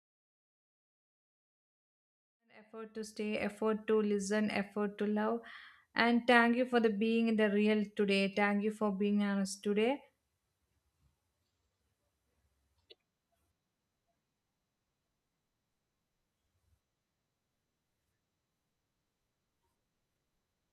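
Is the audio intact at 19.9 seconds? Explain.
Yes, the speech at 19.9 seconds is intact, with no fault at that moment.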